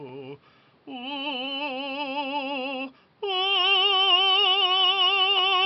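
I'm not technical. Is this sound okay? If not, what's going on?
Yes, this music sounds fine, with nothing going wrong at any point that you'd need to worry about.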